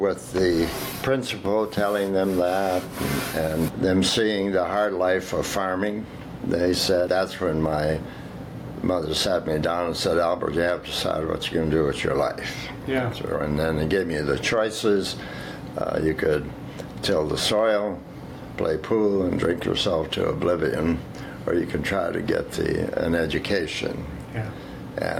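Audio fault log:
Throughout, gain pumping: the gain swings roughly 15 dB under loud sounds, likely from input gain set too high with a fast limiter clamping down.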